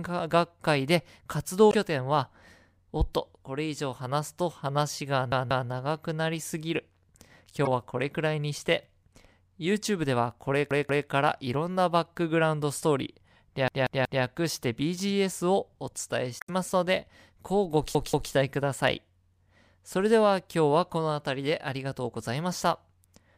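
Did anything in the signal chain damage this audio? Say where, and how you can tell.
Yes. At the playback buffer stage, the device ran dry four times and replayed its last block instead of waiting. The repeated buffer shows as a stutter at 5.32 to 5.69 s, 10.71 to 11.08 s and 17.95 to 18.32 s, each a roughly 186 ms slice heard three times, and at 13.68 to 14.24 s, where it sounds four times. Each repeat has a hard splice. A block that size fits an 8192-sample buffer.

In the codec or storage stage, damaged data in the compressed stream made the decoder misread frames and hunt for the next frame header. The result is short chirps or blips at 1.69 to 1.74 s, 7.65 to 7.67 s and 16.38 to 16.50 s. That points to corrupt bytes in the stream and away from a dropout in the analogue path.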